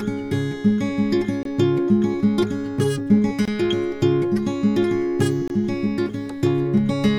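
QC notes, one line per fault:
1.43, 3.45 and 5.48 s, gap between chunks: the music drops out for about 23 ms every 2 s, as silence is left between chunks.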